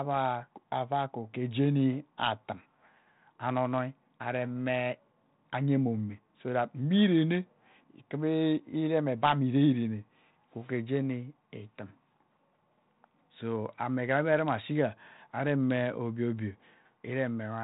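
No technical faults are audible.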